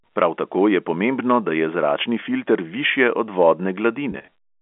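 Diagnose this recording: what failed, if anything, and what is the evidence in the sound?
Network stage: packet loss with pitch repetition. At 2.20–2.22 s, just after "da je zračni", a brief buzzy hold fills a gap that fits one lost 20 ms packet. From 4.12 to 4.28 s, about 100 ms goes missing in runs of 20 ms at most, heard as repeated pitch-period patches.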